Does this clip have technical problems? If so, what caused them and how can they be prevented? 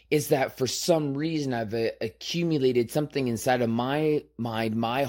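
Yes. Sample clock jitter runs throughout. An unstable converter clock mistimes samples by under a microsecond, leaving a faint hiss about 45 dB below the speech. Prevent it with a clean, low-jitter clock source.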